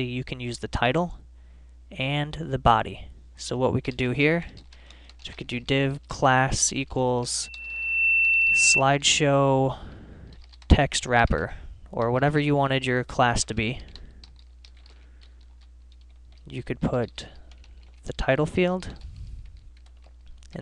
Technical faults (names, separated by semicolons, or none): loudspeaker feedback squeal